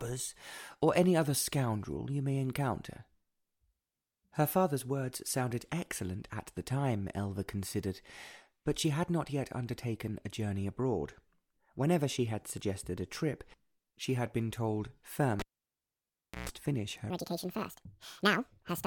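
At 15.39 s a cable is pulled and plugged in. A pop cuts the signal to near silence for about 1.05 s, then a 131 ms burst of 60 Hz mains buzz sounds as only the plug tip makes contact, and a second pop brings the audio back at 16.49 s.

From 17.10 s to the end at 18.86 s, a section plays at the wrong speed: 1.71 times too fast, so it is hurried and shifted up roughly ten semitones. The likely cause is the section being played against the wrong clock.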